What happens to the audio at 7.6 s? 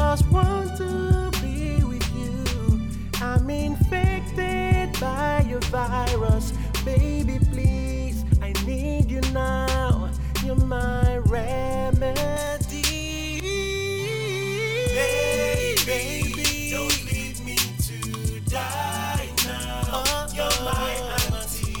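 Nothing goes wrong at 7.6 s; the audio plays through that moment intact, with no dropout, click, glitch or other fault.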